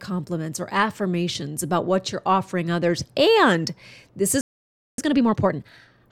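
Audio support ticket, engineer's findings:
Playback stall, 4.41 to 4.98 s: speech cuts off mid-flow for about 0.57 s, then resumes. Likely cause: output buffer underrun or a blocked audio thread starving the device. Waveform shows a flat silent gap with abrupt edges. Spectrogram shows a clean vertical blank band across all frequencies, with no decay tail into it.

Time-compressed catch-up, 4.98 to 6.02 s: speech runs hurried at 1.5x with pitch unchanged. Player is trimming its post-stall backlog by dropping short segments and cross-fading the joins. Spectrogram shows harmonics at normal spacing, but syllables and formant transitions are squeezed closer together. Waveform envelopes look compressed in time.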